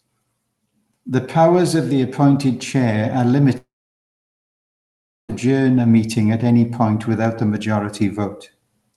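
From 3.57 s to 5.31 s the speech breaks into a brief fading buzz, then silence, before resuming; this is likely a long network dropout, with that stretch lost.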